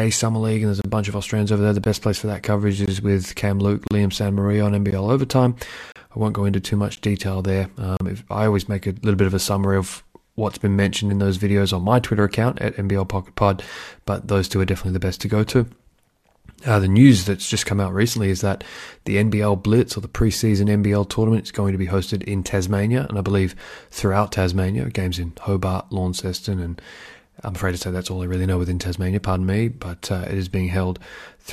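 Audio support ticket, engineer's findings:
Gap between stream segments at 0.82, 1.84, 2.86, 3.87, 4.91, 5.92, 6.96 and 7.97 s: hard-edged silent holes of 15 to 36 ms, one per second. Segment timestamps fall short of contiguity with 1-second segments, so the player pads with silence. No audio lost.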